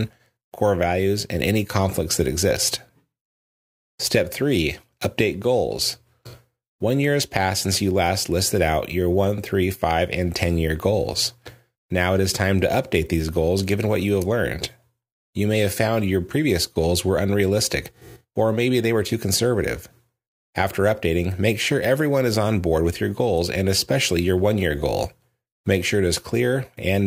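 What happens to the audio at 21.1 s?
Nothing goes wrong at 21.1 s; the speech runs through that moment intact, with no dropout, click or distortion.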